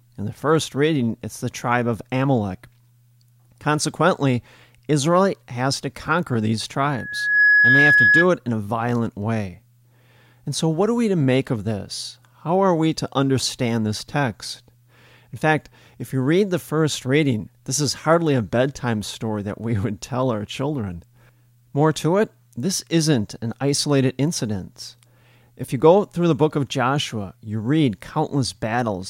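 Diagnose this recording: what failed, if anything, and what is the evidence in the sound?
A steady, pure tone near 1.7 kHz swells over about half a second from 6.89 s, rises a few decibels above the speech and cuts off at 8.27 s. This is loudspeaker feedback squeal in the analogue path: the microphone heard its own loudspeaker, and loop gain exceeded one at that frequency.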